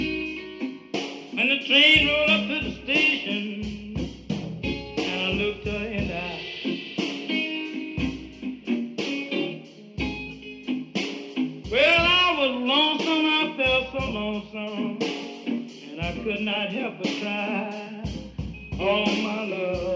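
Nothing stood out on listening; the sound simply carries the ordinary character of a call's microphone processing, with the lowest bass trimmed and nothing above about 8 kHz.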